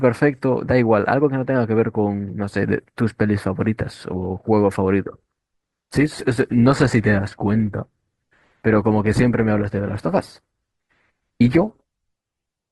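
At 5.88 s the adaptive stream switched to a lower bitrate, likely because the connection slowed, and it stays there to the end. The speech drops without any gap to a sound with stronger codec artefacts, consistent with a step from around 64 to 16 kbit/s Opus.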